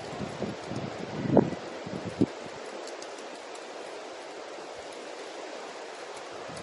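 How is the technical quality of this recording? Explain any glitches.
Quality is poor, with plainly audible codec damage running the whole length. The sound is band-limited, with nothing above 11.1 kHz. Its texture is watery and swirling, with smeared attacks. The likely cause is MP3 compression at a low bitrate, consistent with about 48 kbps. Short of bits, the encoder cuts treble at a fixed point. It also drops weak frequency lines that flicker between frames, causing the swirl.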